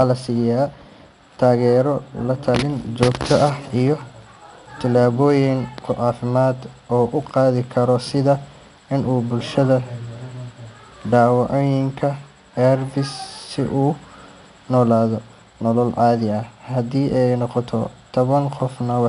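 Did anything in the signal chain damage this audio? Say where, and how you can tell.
Yes, at the codec stage: 4-bit ADPCM compression across the whole speech clip. There's a gritty hiss riding on every loud syllable and roughness on sharp onsets, and nothing above 10.6 kHz, which fits roughly 89 kbps. Each sample is coded as a coarse step from a prediction, so the error scales with level.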